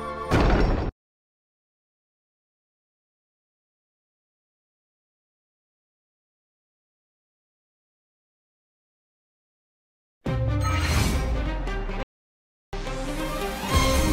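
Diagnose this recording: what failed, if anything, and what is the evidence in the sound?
The failure sits at the playback stage: a playback stall from 12.03 s to 12.73 s, where the sound cuts off mid-flow and stays silent for about 700 ms before continuing. On a waveform this is a flat, near-silent line, and on a spectrogram a clean vertical band with almost no energy at any frequency, edged by abrupt starts and stops. The likely cause is the player's buffer running dry or its output thread being blocked until it recovered.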